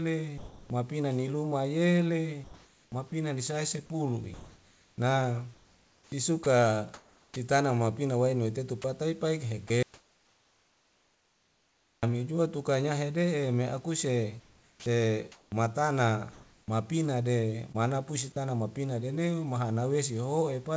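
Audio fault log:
0.38–0.70 s, sound dropped by the voice detector: just before "ni luma", about 320 ms of speech gives way to steady synthetic noise, with roughly a quarter-second of sound lost, likely because the sound was judged background. It is one clean gap with noise, not silence, and the speech returns only once.
2.44–7.36 s, 8.82–9.70 s, 14.40–18.36 s, sound chopped by the voice detector: the speech repeatedly breaks into comfort noise, about 2.18 s in the first stretch, only 40 ms in the second and about 1.08 s in the third (ending before "mapina nadeu"). This likely comes from the detector toggling on and off, with the real room noise sitting about 37 dB below the speech.
9.83–12.03 s, audio dropout to silence: for 2.2 s the sound cuts to silence with no room tone or fill at all, likely from a lost input. The absence of any noise floor distinguishes it from the detector gaps around it.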